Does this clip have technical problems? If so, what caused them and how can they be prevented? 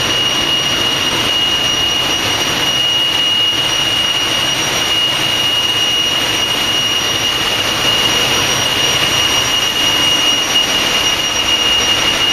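Yes. From 7.84 s to the end, a doubled audio track appears: a full-band copy trails roughly 150 ms behind, about 5 dB quieter, with no decay. The likely cause is a second, slower capture path. The waveform shows repeated, offset transients, and the spectrogram shows ghosted onsets. To prevent it, route the source through only one capture path and mute any monitoring or loopback input.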